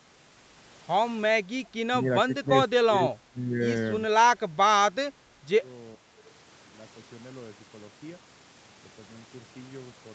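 Six dips in the speech, at 1.43 to 1.48, 1.91 to 2.11, 2.27 to 2.52, 2.68 to 3.63, 4.36 to 5.65 and 5.96 to 6.17 s, are likely speech suppressed in double talk. The echo canceller mistook the talker for loudspeaker echo and pulled the level down, by anywhere from about 5 dB to about 20 dB. The sound fades rather than clicking as packet loss would.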